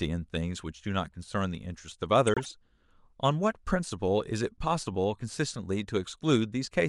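Damaged bits in several compressed frames were decoded as if valid, so from 2.27 to 2.53 s the speech breaks into a fairly loud burst of chirpy, misplaced noise.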